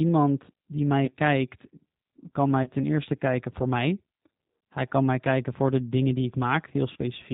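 G.729 codec damage runs through the whole of this speech clip. It is plainly audible as a rough, slightly synthetic tone with nothing above 4 kHz, because the decoder rebuilds the sound from a vocal tract filter, a pitch predictor and a few pulses per frame, which fits an 8 kbit/s G.729A stream. VoIP packet loss concealed by the speech codec occurs at 1.05 to 1.11 s just after "die mij", at 2.63 to 2.69 s just before "ten eerste kijken voor", and at 6.93 to 6.97 s. Each gap fits a single lost 30 ms packet that the decoder bridged by stretching its last pitch and filter into a fading smear that lingers briefly once audio returns.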